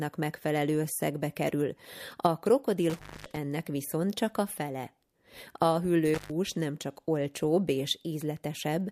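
Intermittent contact at 2.90–3.37 s and 6.14–6.31 s: a loose connection briefly opens, so the speech drops out for about 250 ms after "megfelelő összegbe kerül a" and 120 ms before "nem csak olcsóbb", with crackle at each edge and faint hiss during the gap.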